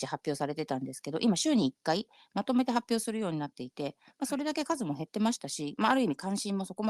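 At 6.12 s the call software likely lowered the microphone's input volume in a single step, a microphone volume stepped down fault. Everything in the speech clip, voice and background alike, drops abruptly by about 2 dB and stays at that quieter level.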